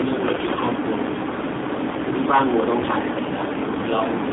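A short speech clip carried over the AMR narrowband mobile codec for its whole length. The line band runs from about 200 Hz to 3.6 kHz. Nothing above that survives, so the sound is thin and boxy. The codec rebuilds speech from a vocal tract model fed by a few pulses per subframe. Here that model is working hard, and the damage is plainly audible. The sound is buzzy and synthetic, which points to a low bitrate near 7.4 kbps. At 0.03 s the level drops suddenly by about 4 dB, in a single step. Speech and background fall together. This is likely the microphone volume stepped down by the call software, cutting input gain at once rather than fading it. From 0.34 to 0.72 s the sound turns hoarse, scratchy and gargly. Pitch and loudness stay roughly in place, but the texture breaks up. These are AMR bit errors. Over that stretch a number of frames arrive with some bits flipped, which fits an error rate of a few percent. 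The checksum on the key bits still passes, so the decoder uses the frames. The excitation pulses land in the wrong places. The finer gain and spectrum values are also off, which gives the rough, gargling sound.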